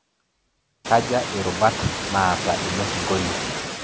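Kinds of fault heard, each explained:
Noise suppressor artifacts: bands judged to be steady noise are pulled down frame by frame, by about 14 dB, so the background dips in pauses and returns under the speech. The room noise rises around 1 s, to about 7 dB below the speech.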